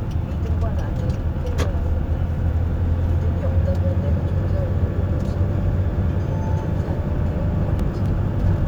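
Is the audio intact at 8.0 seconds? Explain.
No. From 7.27 to 8.06 s the sound carries four short ticks, each lasting only a few milliseconds and evenly spaced. These are CD scratch ticks: a surface blemish corrupts more data than error correction can repair, so the player patches or mutes those samples on each disc revolution.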